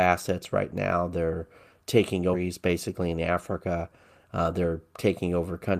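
At 2.33 to 2.35 s there is a skip ahead. The receiver discarded a stretch of incoming speech, around seven-tenths of a second, while later audio was already queued, either because it was lost in transit or because the jitter buffer overflowed. Playback jumps straight to that later material with nothing inserted in the gap. The two sides meet almost directly, so a chunk of speech is simply missing and the join sounds abrupt.

From 2.43 to 3.31 s comes a jitter buffer speed-up. The buffer was holding more audio than its target, so the receiver trimmed short slices, each one or a few pitch periods long, repeatedly to pull latency down. Roughly a tenth of a second was removed in total, making playback run at about 111% speed. Pitch stays the same, but the speech sounds rushed and slightly compressed in rhythm.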